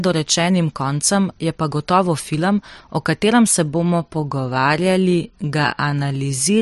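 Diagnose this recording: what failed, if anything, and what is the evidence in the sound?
From 3.62 s to the end at about 6.6 s, the speech suddenly drags to roughly 0.7 times its earlier pace while the pitch stays put. That's a time-stretched section, likely done in editing software that padded the audio to fit a length by repeating short pieces.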